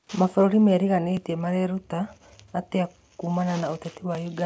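From 1.17 s to 4.15 s the speech carries periodic USB or driver dropouts. Roughly every 1.0 s a few milliseconds of audio are skipped, giving regular ticks.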